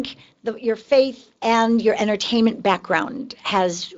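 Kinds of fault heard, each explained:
No faults detected in this speech clip.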